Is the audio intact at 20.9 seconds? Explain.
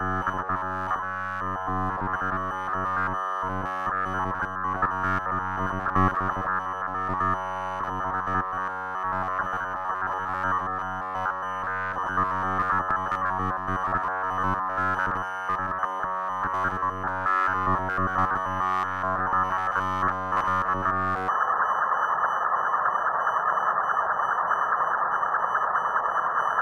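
No. From 0.01 to 21.29 s there is robotic sound from repeated short buffers: a rigid 93.8 Hz buzz, likely from the last roughly 10.7 ms block being repeated while new audio arrives too seldom.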